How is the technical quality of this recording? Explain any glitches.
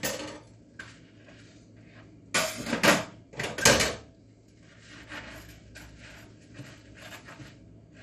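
The quality is poor, with plainly audible coding damage throughout. The sound is dull and carries a gurgling, granular texture from start to finish. Nothing is present above 15.2 kHz. The likely cause is MP2 compression at a low bitrate, consistent with roughly 64 kbps. MPEG Layer II divides the spectrum into 32 equal bands and shares out bits among them. When bits run short, upper bands drop out and flicker, and the remaining bands are coarsely quantised.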